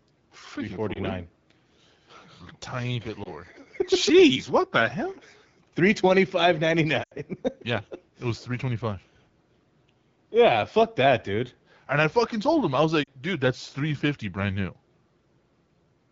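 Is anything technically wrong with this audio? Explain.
Yes. Speech briefly dips or warbles at 0.93–0.99 s and 3.23–3.32 s, then drops toward near silence at 7.03–7.13 s after "twenty five ninety" and at 13.03–13.09 s between "told him I was" and "dude that's three fifty." These are lost AMR speech frames. Radio errors corrupted frames, so the decoder replayed the last good settings at falling gain. The gaps fit roughly 20, 20, 80 and 40 ms of lost frames, carried over the wideband (HD Voice) AMR-WB codec at 12.65 kbit/s.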